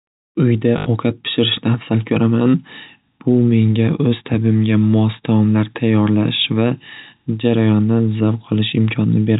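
At 0.78 s there's packet loss with the last packet repeated: about 80 ms replayed in a loop, which fits four 20 ms packets, giving a brief robotic 50 Hz stutter over telephone-band G.711 audio.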